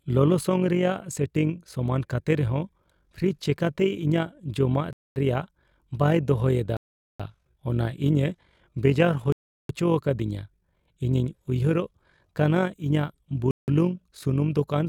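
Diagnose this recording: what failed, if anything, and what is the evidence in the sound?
The speech cuts to silence four times, at 4.93–5.16 s just before "ᱨᱮᱭᱟᱲ ᱵᱟᱭ ᱫᱚᱦᱚᱭ", at 6.77–7.20 s right after it, and at 9.32–9.69 s and 13.51–13.68 s, then resumes. This is likely a Bluetooth stall on the wireless playback link. Delayed packets emptied the headphone buffer, and playback paused until the retransmissions arrived.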